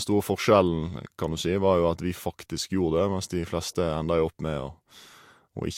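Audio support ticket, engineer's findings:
Speech, whole clip: transcoding between lossy codecs, likely. Mixed smearing and swirly artefacts, nothing above 16.6 kHz. Fits MP3 near 96 kbit/s re-encoded to Vorbis near 63 kbit/s, artefacts stacking.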